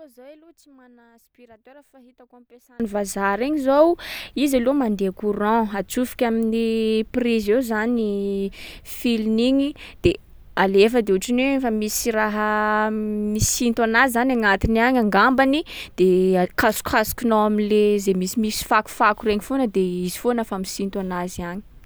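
Right from the start until about 2.8 s, the speech drops to roughly 29 dB below where it settles afterwards, leaving only a faint trace before it snaps back to full body. That's most likely one channel inverted: with one side's polarity flipped, the shared centre content cancels when the two are folded to mono, so the voice and low end all but disappear and only the small difference between channels gets through.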